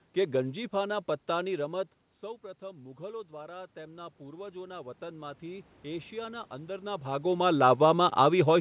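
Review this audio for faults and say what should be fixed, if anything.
Automatic gain rising, 2.21 to 7.16 s: after the input fell by about 16 dB when the talker moved back, the gain control raised its gain by about 10 dB, so speech and room noise swell together. To prevent it, cap the gain control's maximum boost and slow its rise so a quieter talker doesn't drag the background up too.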